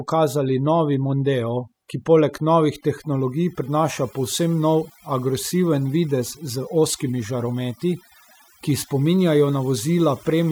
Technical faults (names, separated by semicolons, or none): overdone noise removal